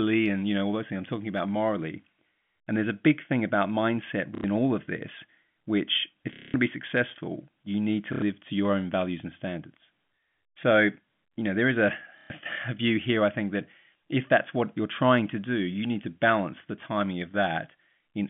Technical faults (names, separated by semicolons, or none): packet loss with last packet repeated